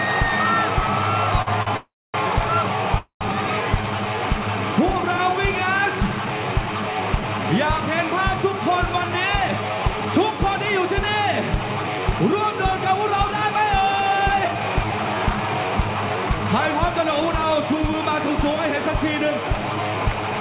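At 1.42 s and again at 1.63 s there is a short stall from a late packet. Each time a packet missed its playout slot, the jitter buffer ran dry, and the receiver held the last sound for 46 ms and then 38 ms before continuing from the same point. Nothing is lost. The sound is drawn out slightly with a faint buzz, and playback ends up about 84 ms later than before.

From 1.76 s to 2.16 s, and again from 2.98 s to 3.23 s, the audio freezes, the likely cause being packets delayed in transit that left the buffer empty. The first freeze lasts 374 ms. The final sound is extended as a decaying buzz and then goes silent for about 260 ms. The second lasts 228 ms, with about 120 ms of silence. Playback then resumes where it stopped, so these are inserted gaps rather than dropouts.

From 8.94 s to 9.70 s, and from 11.76 s to 17.89 s, the jitter buffer speeds up playback to shed the excess delay built up earlier. 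It repeatedly cuts out pitch-period-sized pieces, running at 109% and then 107%. That removes under a tenth of a second in the first stretch and about 0.4 s in the second. Pitch is unchanged, but the audio sounds hurried. Throughout, the call path passes nothing above 4 kHz, which fits G.711 mu-law at 64 kbps.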